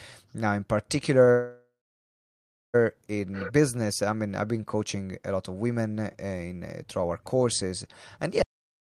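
At 1.25 to 1.29 s, just before "in business I mean", the speech shows a short stall from a late packet. A packet missed its slot, the jitter buffer emptied, and the receiver held the last sound for about 16 ms before carrying on with nothing lost.

Right after, from 1.31 to 2.76 s and again ahead of "in business I mean", comes a call audio freeze, likely from packets held up in transit. The last sound is extended as a fading buzz or hiss, then about 1.03 s of silence, inserting 1.43 s of delay without losing speech.

From 8.42 s to the end, just after "courses and", the audio drops to silence with no room tone. This audio dropout to silence most likely comes from the input being lost while silence was still written, so whatever followed is gone.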